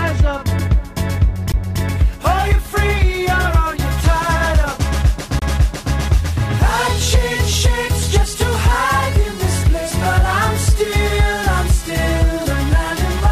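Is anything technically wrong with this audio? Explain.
Yes. There are two CD skips, at 1.52 s and from 5.39 to 5.42 s. Each time a knock or a flaw made the laser jump onto a different turn of the disc's spiral, so the player muted briefly, for roughly 15 ms and then roughly 30 ms, and resumed from another point. The result is a tick or tiny gap followed by an abrupt jump in the sound. On a waveform this shows as a brief dropout with a sharp discontinuity, and on a spectrogram as a thin vertical break.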